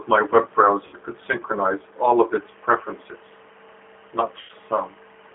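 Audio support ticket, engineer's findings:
G.729 codec, whole clip: narrowband and a bit rough and synthetic, nothing above about 3.5 kHz and thin below 300 Hz. Codec damage plainly audible. Sounds like the 8 kbit/s G.729A path: filter plus pitch predictor plus a few pulses per frame, so the finer texture of the speech gets lost.

VoIP packet loss concealed by the speech codec, 0.87 to 0.96 s: sound smears into a short buzzy or noisy stretch and fades, about 60 ms missing, which fits three lost packets. The decoder repeats its last pitch and filter at dropping gain.

Same fault again, 4.41 to 4.53 s: longer buzzy or noisy fade, about 80 ms gone, which fits four lost packets. Speech stays weak and distorted briefly after audio returns while the decoder state recovers.

Timecode bleed, 2.36 s to the end: faint chirpy warble flipping between roughly 1 and 2 kHz, well below the speech. LTC is leaking from a neighbouring track or cable. 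The rate fits 23.976 fps code. Check routing and shielding.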